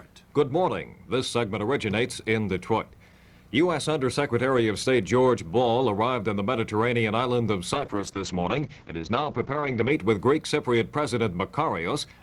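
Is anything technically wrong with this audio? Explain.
Yes. From 7.74 s to 9.97 s there is a call bitrate drop: the connection's bandwidth estimate fell, and the encoder was forced down to a fraction of its bit budget, consistent with a fall from around 48 kbps to around 8 kbps for about 2.2 s. Starved of bits, it codes coarsely and discards high frequencies, so the audio band shrinks from about 20 kHz to about 8 kHz. The sound turns muffled and rough, with a watery texture, until quality returns near 10 s.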